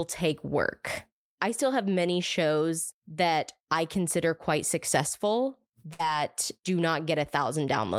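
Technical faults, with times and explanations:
5.93 to 6.01 s, burst of packet loss. Right after "I consider quite successful", packets went missing. The receiver carried the last sound on for about 55 ms, fading it down. The speech then resumes with about 60 ms skipped.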